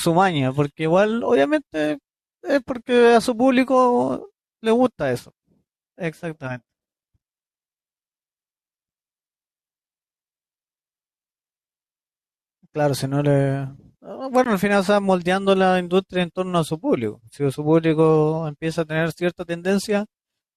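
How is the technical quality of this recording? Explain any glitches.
One glitch stands out in this speech recording. At 14.44 s a gap between stream segments leaves a hard-edged hole of about 16 ms of silence where two 6-second segments' timestamps fail to meet; no audio is lost.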